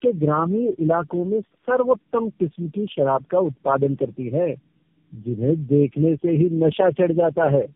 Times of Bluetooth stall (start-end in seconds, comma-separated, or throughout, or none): none